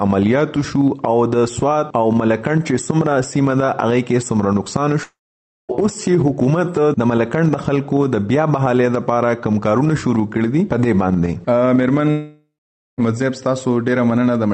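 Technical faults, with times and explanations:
5.03–5.71 s and 12.11–12.997 s, long network dropout: about 0.66 s and 0.88 s of sound vanish. A brief decaying buzz gives way to about half a second of silence, likely from lost packets.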